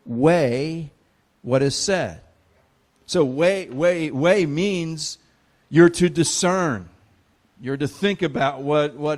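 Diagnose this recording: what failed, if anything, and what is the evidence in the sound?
A brief spurious sound at 1.67 s, right after "weigh what", points to a corrupt frame decoded at the codec stage: flipped bits in a single frame were played anyway, misplacing energy across frequencies.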